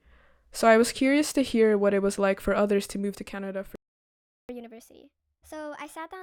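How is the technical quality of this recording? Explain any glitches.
The recording has two linked playback faults in the second half.

A playback stall runs from 3.76 to 4.49 s. The speech cuts off mid-flow and there is silence for about 0.74 s. The player likely ran out of data or had its thread blocked until it recovered.

Catch-up at higher speed follows from 4.49 s to the end. The player works through its backlog by resampling at 1.25 times normal speed. The speech sounds hurried and raised in pitch by roughly four semitones. It never drops back before the clip ends.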